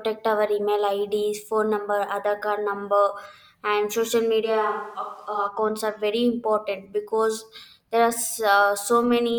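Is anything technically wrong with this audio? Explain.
Yes, one fault. From 4.46 to 5.46 s, the speech turns roomy, hollow and thin, about 5 dB quieter with a faint background noise, likely a switch to a distant microphone. The waveform drops abruptly, and the spectrogram loses low-frequency energy.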